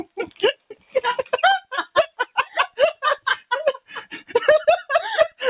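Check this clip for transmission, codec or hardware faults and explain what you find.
A speech-oriented noise suppressor is processing the sound and cutting it in three places. The band ends at 4 kHz with the usual coding noise of G.711 A-law, which fits a 64 kbps narrowband call path.

Noise suppressor applied to music or sounds, throughout the clip: a suppressor tuned for speech treats sustained tones, ambience and reverb as noise to remove. Its gain swings by around 10 dB, so held material sinks and recovers between attacks, giving a pumping, fluttering, thinned texture.

Sound cut by the noise suppressor, at 0.30–0.97 s, 1.61–3.46 s and 3.76–4.31 s: in these stretches the suppressor judged the steady or decaying sound to be noise. It pulled it down by up to about 16, 15 and 16 dB, for roughly half a second, 0.7 s and half a second of affected sound. Tails sink or are cut short while sharper onsets mostly survive.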